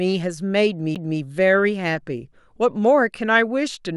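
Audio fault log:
0.95 s CD skip: the laser jumps to another turn of the disc's spiral, giving a tick, a roughly 10 ms mute, then speech resuming from a different point.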